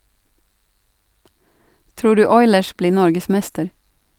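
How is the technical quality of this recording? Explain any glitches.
No glitches can be heard anywhere in the speech. Nothing in the recording interrupts or disturbs it at any point.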